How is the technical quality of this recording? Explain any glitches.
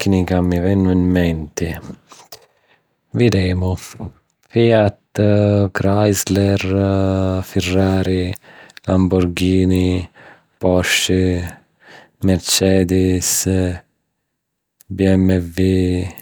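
No glitches or technical faults are audible anywhere in the recording.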